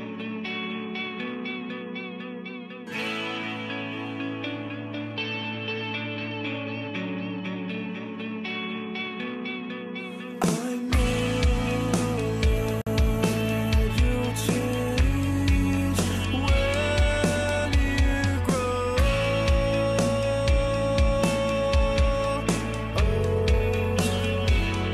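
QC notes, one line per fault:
12.82–12.87 s, gap at a join of encoded pieces: 51 ms gap left by untrimmed encoder padding; flat waveform, blank spectrogram stripe, smeared edges.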